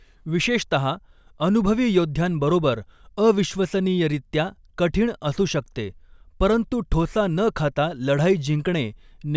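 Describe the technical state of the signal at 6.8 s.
At 6.8 s the speech signal is intact, with no technical fault at that point.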